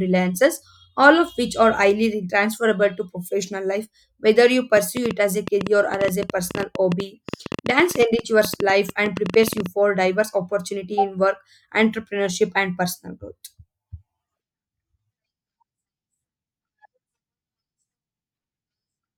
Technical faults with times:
4.77-9.67 train of clicks

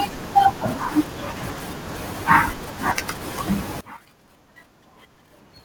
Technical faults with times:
3.81-5.64 one channel inverted

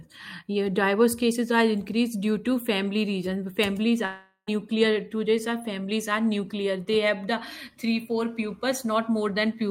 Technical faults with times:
4.05-4.49 long network dropout

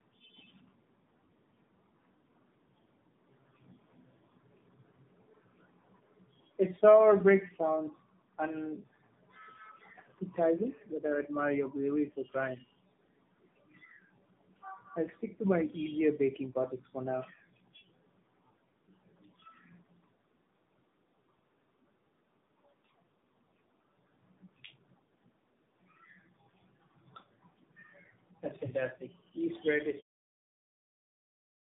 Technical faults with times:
0.00-31.76 tandem speech coding

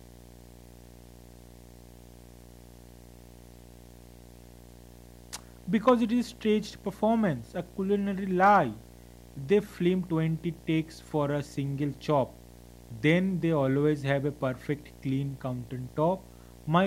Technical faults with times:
0.00-16.86 video or display buzz

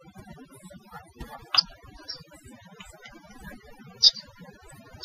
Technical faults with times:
0.00-5.04 overdone noise removal

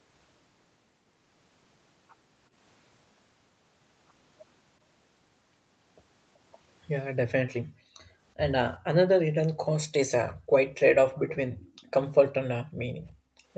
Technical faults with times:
7.62-8.16 background gated by the echo canceller
9.56-9.64 background gated by the echo canceller
10.34-10.54 background gated by the echo canceller
11.17-11.28 background gated by the echo canceller
11.59-11.93 echo leak
12.64-13.52 background gated by the echo canceller

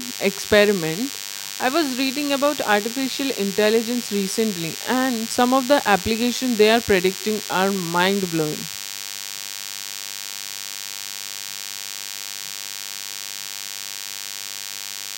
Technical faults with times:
0.00-15.18 DECT cordless phone buzz

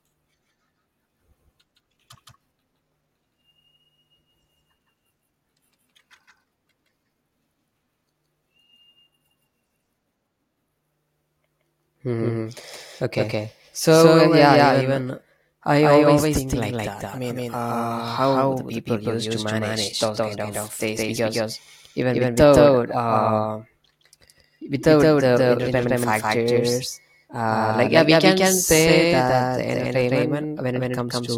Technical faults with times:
0.00-31.37 doubled audio track

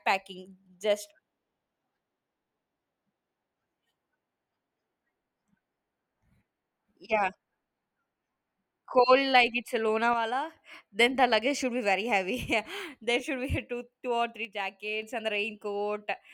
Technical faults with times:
10.13-10.57 one channel drops out
14.45-15.02 one channel drops out

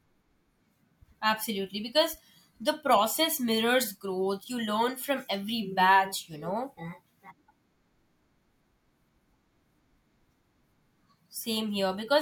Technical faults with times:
none

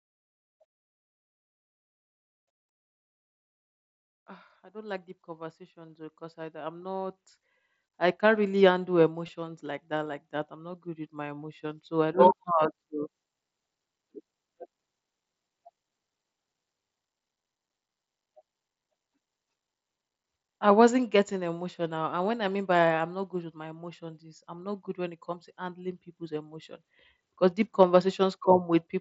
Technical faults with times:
4.71-11.91 automatic gain rising
6.82 concealed Bluetooth headset packet loss
9.27 concealed Bluetooth headset packet loss

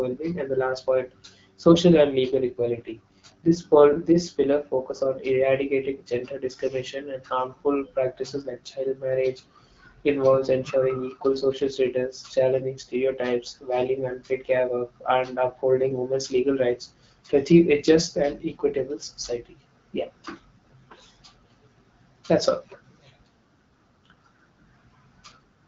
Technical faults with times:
2.02-4.44 AMR rate drop
10.56-11.91 AMR rate drop

